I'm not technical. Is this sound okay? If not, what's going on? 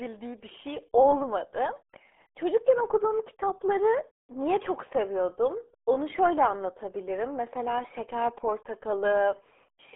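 No. From start to finish, the speech has been squeezed through a very old, very cheap speech codec, the RealAudio 14.4 codec built for dial-up modems. It throws away everything above about 3.8 kHz and badly smears what remains, so voices sound muffled and gargly.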